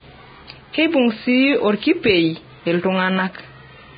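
Throughout this short speech recording the sound is hissy and grainy, with nothing at all above about 4.9 kHz, so sibilance and air are gone and what treble remains is coarse noise rather than detail. Tones sound roughened and consonant attacks are smeared. This is likely heavy Vorbis compression at a very low bitrate, around 16 kbps, where the encoder lowers the cut-off and quantises the upper residue so crudely that fine structure turns into noise.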